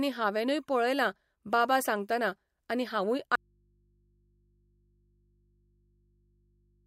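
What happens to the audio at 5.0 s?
The signal path most likely lost its source mid-stream while the input stayed open, giving an audio dropout to a faint residue from 3.35 s to the end. Right after "बाबा सांगतना आनी हांवूय" the speech cuts off abruptly, leaving only mains hum about 40 dB down.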